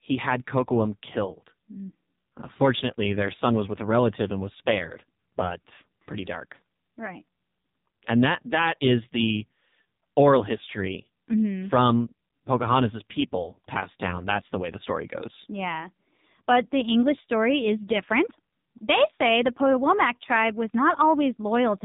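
Throughout the speech, an AMR narrowband mobile codec running at very low bitrate, consistent with its 5.9 kbps mode, rebuilds the voice from a crude vocal-tract model. Nothing above 3.8 kHz survives, so the speech sounds muffled, heavily buzzy and synthetic.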